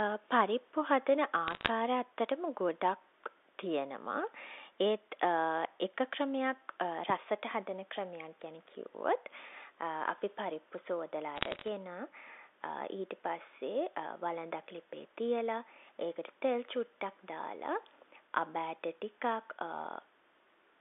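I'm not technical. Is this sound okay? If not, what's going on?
No. Bit errors on a digital phone line cause two short bursts of crackle, from 1.48 to 1.7 s and from 11.36 to 11.68 s. The phone line carries speech as a stream of numbers, and roughly one bit in two hundred got flipped, each flip changing one tiny slice of sound, and flips on the most important parts of a number turning it into a sharp tick, while the speech underneath stays intact.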